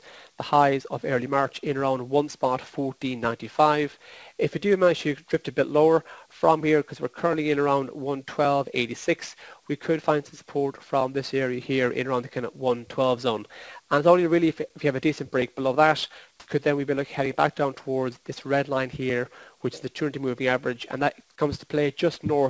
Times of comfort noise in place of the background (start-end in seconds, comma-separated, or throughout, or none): 16.40-16.48